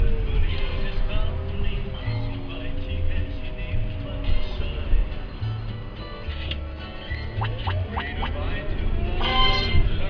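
No technical faults can be heard anywhere in this clip. Nothing in it calls for a time mark or a closer look.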